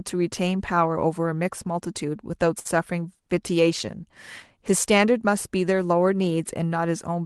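A short stall from a late packet hits this speech recording at 2.59 to 2.67 s. The jitter buffer ran dry, so the receiver held the last sound for about 56 ms until the packet arrived. Nothing is lost, but everything after is 56 ms later. Across the call path, the audio is cut off near 12 kHz.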